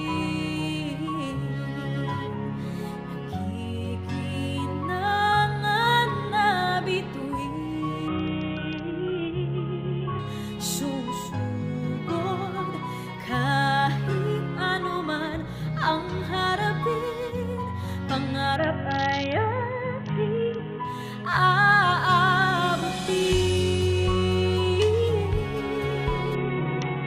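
Bluetooth SBC bit pool drops at 8.08 to 10.19 s, 18.56 to 20.85 s, and from 26.35 s to the end. Each time the encoder's bit budget collapsed, consistent with bit pool 28 falling to 6, around 60 kbps. Upper sub-bands starve, so treble dulls and gritty quantisation noise rises.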